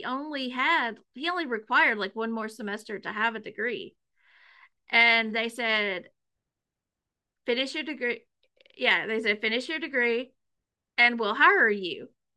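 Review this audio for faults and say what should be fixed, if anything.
Nothing should be fixed, as the review turns up no faults in the audio.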